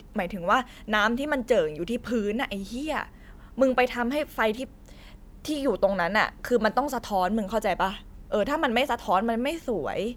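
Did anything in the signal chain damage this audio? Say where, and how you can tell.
No, nothing in the chain from capture to playback has left an audible mark on this speech recording.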